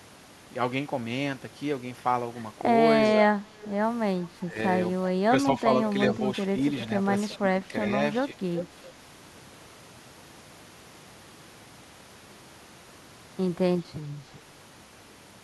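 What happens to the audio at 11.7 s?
Nothing goes wrong at 11.7 s; the speech carries on intact through that moment with no dropout, click, glitch or other fault.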